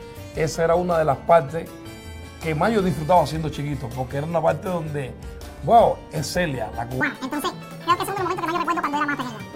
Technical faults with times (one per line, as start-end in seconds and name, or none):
7.01-9.55 audio read two samples at a time (double speed)